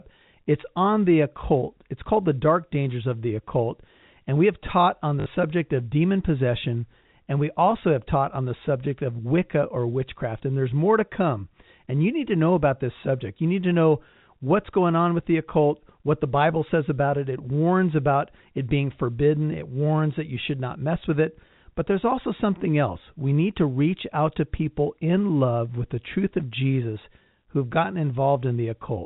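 Packet loss with the last packet repeated strikes this speech clip from 5.2 to 5.26 s, between "we have taught on" and "subject of demon possession": about 60 ms of audio vanished, which fits three 20 ms packets, and the receiver looped the last one, so the repeats produce a brief 50 Hz robotic buzz over the telephone-band G.711 sound.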